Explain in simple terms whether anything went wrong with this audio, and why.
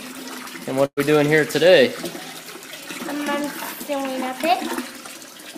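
At about 0.85 to 1.00 s there's a burst of packet loss: a chunk was lost or arrived too late, the player stretched and faded the last sound, then jumped ahead.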